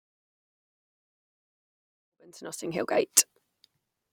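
No technical faults can be heard in this speech clip. There is a smooth fade-in, rising gently from around 2 s to full level by 3.43 s, with no click or hard edge.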